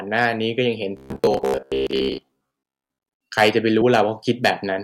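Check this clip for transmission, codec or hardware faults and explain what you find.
The speech clip has three kinds of fault: hard clipping in three places, a robotic buzz from repeated short buffers, and one jump from skipped compressed frames.

Hard clipping occurs at 0.16–0.26 s (about 2 dB over), 3.38–3.99 s (about 8 dB) and 4.45–4.50 s (about 6 dB). The peaks exceed what a stage can pass and are cut flat, adding high harmonics. The mildest event is a brief crackle, while the 8 dB stretch becomes a harsh fuzz.

Robotic sound from repeated short buffers runs from 0.97 to 2.99 s. The likely cause is audio arriving too seldom, with the last slice of roughly 15 ms replayed to fill the gaps, so most of the real audio there is lost. That repetition imposes a steady 66.8 Hz buzz, which makes the speech sound rigid and metallic.

Compressed frames skipped at 3.81 s. About 50 ms of audio is missing, which fits two 24 ms codec frames that were dropped or rejected as damaged. 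The jump falls inside the heavily clipped stretch.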